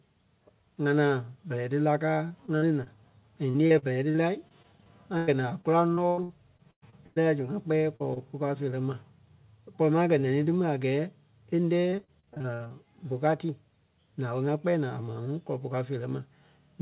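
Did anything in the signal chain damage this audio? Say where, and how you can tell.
Yes. Repeated packet loss (robotic sound) at 2.28–2.88 s, 3.50–7.18 s and 11.90–12.72 s is a network fault. Back-to-back gaps of up to 110 ms were patched by stretching earlier sound, which gives choppy stretches with pieces missing.

Short concealed packet loss at 7.96–8.02 s and 8.14–8.18 s, just before "puu káo feerɛ ma", is also network loss. The 40 ms and 20 ms holes were filled from the preceding sound and heard as brief smears.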